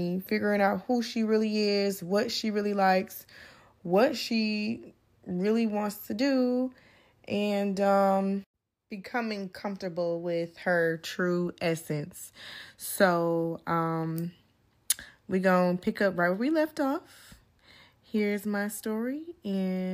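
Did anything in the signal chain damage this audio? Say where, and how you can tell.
No, nothing in this signal chain damaged the audio.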